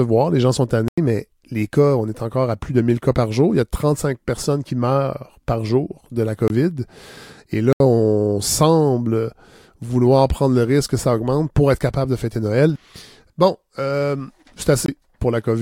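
Blocks of digital silence at 0.88, 6.48, 7.73 and 14.86 s: unfilled output buffers drop the sound abruptly to silence for 23 to 93 ms.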